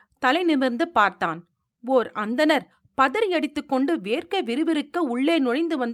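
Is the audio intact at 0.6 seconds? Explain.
Yes, at 0.6 seconds the speech is intact, with no audible dropout, click, distortion or other technical fault at that moment.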